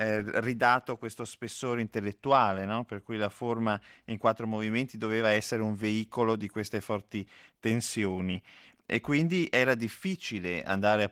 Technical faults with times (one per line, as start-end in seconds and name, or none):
none